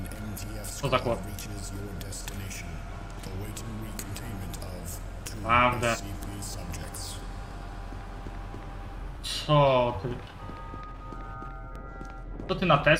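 Six skips ahead, at 4.94, 6.16, 7.51, 9.17, 10.51 and 11.76 s, each losing a few milliseconds; likely a dropped buffer (overrun).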